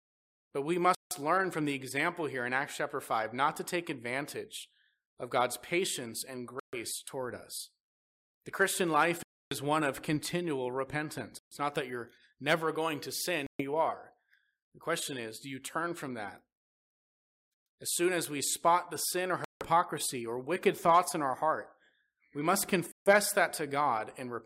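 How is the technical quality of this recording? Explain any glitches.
The speech is repeatedly interrupted by brief dropouts to silence, a Bluetooth stall pattern. They occur at 0.95, 6.60 ("patience and" to "toward us"), 9.23, 11.39, 13.47, 17.54, 19.44 (after "spot the sin or") and 22.92 s (after "we must"). Each gap lasts about 0.12 to 0.29 s, then the speech resumes. The likely cause is wireless interference delaying packets until the headphone buffer emptied.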